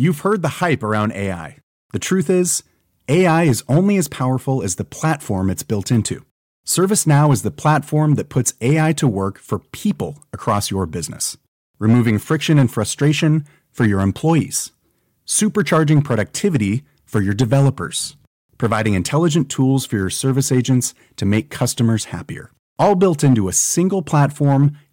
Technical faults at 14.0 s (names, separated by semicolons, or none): hard clipping